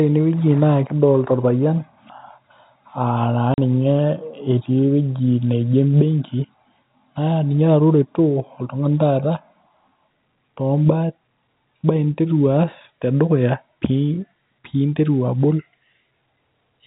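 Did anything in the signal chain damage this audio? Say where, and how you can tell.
Yes, at the network stage: packet loss filled with silence. At 3.54 s the speech drops out for 40 ms, which fits two 20 ms packets, and the gap has hard edges. The receiver played silence for the missing packets. The G.711 telephone coding underneath is band-limited to 4 kHz.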